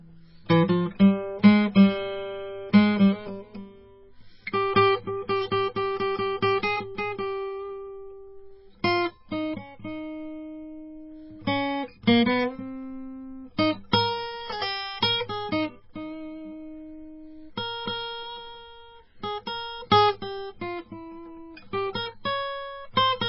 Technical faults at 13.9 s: MP3 compression; pre-echo

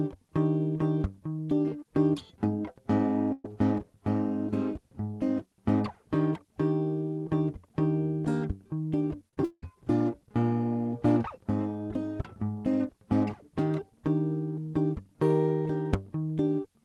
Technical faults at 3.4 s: burst of packet loss

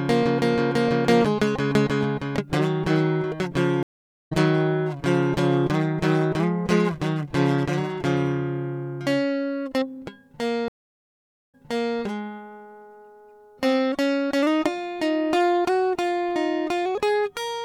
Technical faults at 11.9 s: stream reconnect

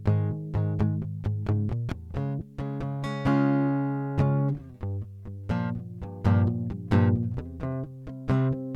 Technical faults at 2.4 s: lost LE Audio frames

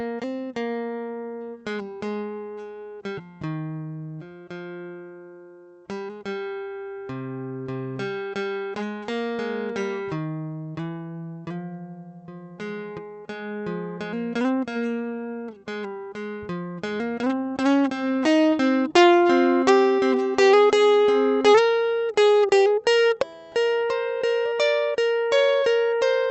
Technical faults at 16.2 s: none

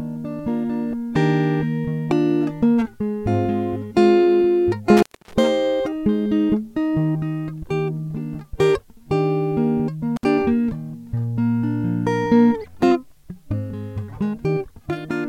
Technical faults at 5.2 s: intermittent contact

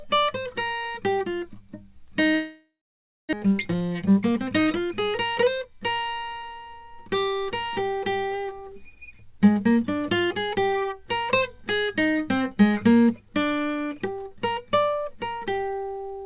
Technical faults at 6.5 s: jitter buffer speed-up

